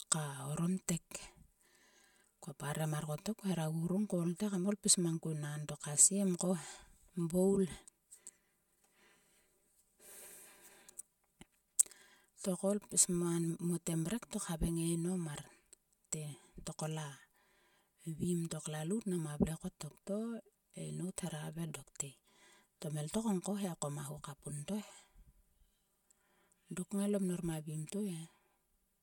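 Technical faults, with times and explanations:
Throughout, channel delay (comb filtering): one channel trails the other by about 5 ms, and summing them to mono cancels shared content at evenly spaced frequencies, first near 100 Hz, then roughly every 200 Hz, leaving the speech hollow and phasey.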